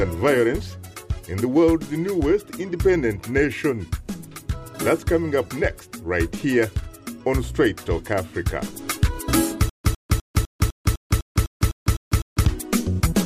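From 9.69 to 12.45 s there's a stutter with silent gaps: a 102 ms burst repeats every 252 ms between stretches of dead silence, likely a stalled stream retrying.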